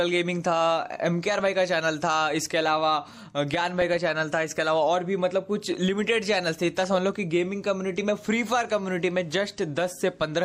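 DAB burbling appears from 1.34 to 1.48 s, 3.52 to 4.12 s and 6.55 to 6.85 s. Uncorrected bit errors at a fraction of a percent corrupt MP2 samples, giving short blips of noise in single sub-bands rather than silent dropouts.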